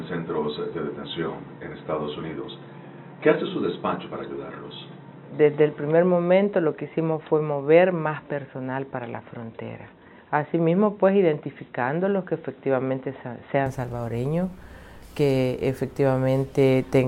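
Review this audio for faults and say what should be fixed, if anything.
From the start to 13.66 s the sound is dull and boxy, with nothing above 3.9 kHz and a faint added noise floor roughly 35 dB below the signal. At 13.66 s it clears up again with no gap and no real jump in level. The likely cause is an input switched to a poorer device, such as a narrowband headset profile, for that first stretch. To prevent it, pin the intended microphone as the fixed input before recording starts.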